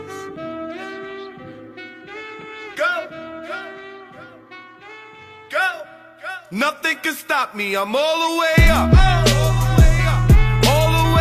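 Nothing stood out on listening to this clip.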